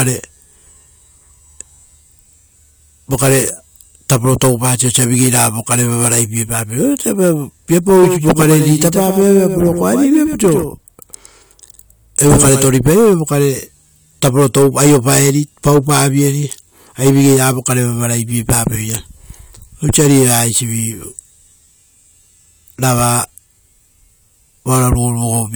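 From 8.03 s to 12.65 s the speech has a doubled audio track. A second copy of the same speech runs about a tenth of a second behind the first. It sits roughly 10 dB quieter and covers the full frequency range. There is no reverb tail or room colour on it, so it sounds like a crisp slapback echo. The copy appears and disappears abruptly at those points. It is likely caused by the signal being captured twice through a slower second path.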